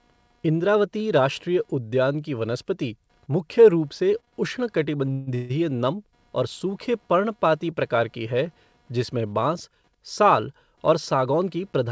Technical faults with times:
0.00-11.91 computer activity noise
4.20-4.35 short stall from a late packet
5.13-5.51 call audio freeze
10.91-11.57 jitter buffer speed-up

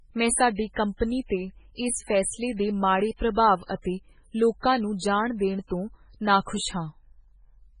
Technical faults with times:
0.00-7.80 MP3 compression

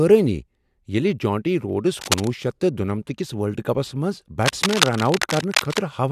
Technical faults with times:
2.01-2.28 cable scratch noise
4.43-5.80 cable scratch noise

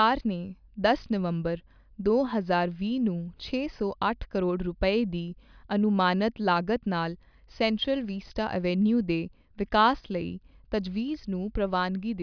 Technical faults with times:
none

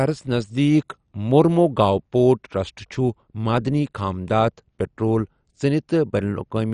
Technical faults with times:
0.00-6.73 MP2 compression

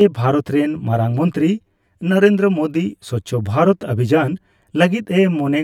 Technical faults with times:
0.00-5.64 channel delay (comb filtering)

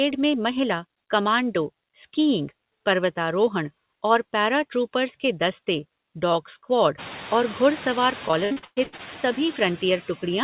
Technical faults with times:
0.00-10.43 noise suppressor artifacts
8.28-9.01 repeated packet loss (robotic sound)

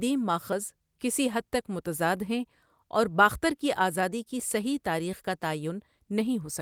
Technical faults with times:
none

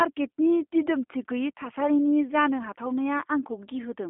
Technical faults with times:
0.00-4.09 G.729 codec

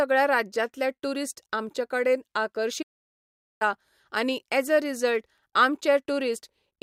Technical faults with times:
2.82-3.62 playback stall

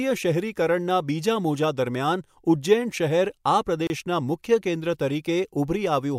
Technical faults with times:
3.87-3.90 gap at a join of encoded pieces

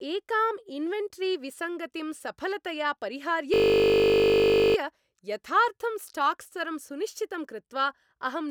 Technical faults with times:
3.54-4.76 system hang loop

